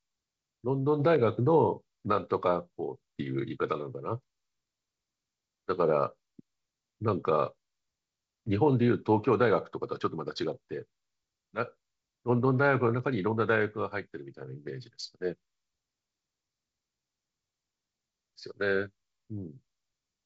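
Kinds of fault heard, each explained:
No faults heard; the speech carries G.722 wideband telephone coding at 64 kbit/s, with nothing above 7.8 kHz.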